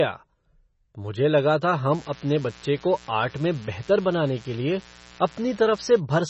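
MP3 compression runs throughout: heavy, watery swirling and nothing above 8 kHz, likely from an encoder starved of bits, which fits a rate near 24 kbps. Mains buzz runs from 1.87 s, just after "मुझे लगा था", to 6.02 s: switching spikes at twice the 60 Hz cycle add a raspy harmonic buzz roughly 25 dB below the speech.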